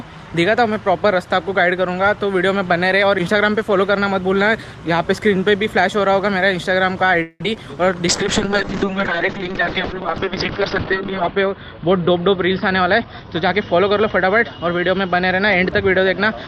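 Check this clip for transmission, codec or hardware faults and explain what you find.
Four kinds of fault appear, all from 7.2 s onward: a call audio freeze, two short concealed packet losses, a call bitrate drop that lasts to the end, and a jitter buffer speed-up.

From 7.22 to 7.41 s there is a call audio freeze. Packets were likely held up and the jitter buffer ran dry. The receiver stretched the last sound for about 177 ms as a fading tail, including roughly 20 ms of silence. It then resumed where it stopped, inserting a gap without losing audio.

Short concealed packet loss follows at 7.43 to 7.45 s and again at 7.54 s. Each time about 10 ms of audio missed the decoder. The receiver filled the hole by extending the preceding sound and then blending back, which is heard as a brief smear or wobble.

A call bitrate drop begins at 8.08 s. The bandwidth estimate fell and the encoder went from 40 kbps down to 6 kbps, spending about 2.05 s at the lowest rate. 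Coarser coding and a cut of the top end from 20 kHz to 6 kHz make the audio rougher and duller, and it has not cleared by the end.

From 12.01 to 14.24 s a jitter buffer speed-up occurs. The buffer held more audio than its target, so the receiver repeatedly cut out short pitch-period pieces, about a fifth of a second in total. Playback runs at 108% speed with unchanged pitch, which sounds hurried.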